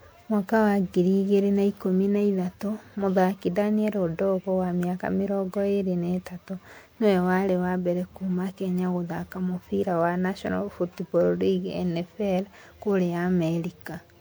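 Throughout the speech, the sound is swirly, smeared and hollow, with blurred attacks. This is generation loss. The likely cause is repeated lossy re-encoding, about five passes, consistent with MP3 at 128 kbit/s. Each pass requantises on a shifted frame grid, compounding noise and spectral holes.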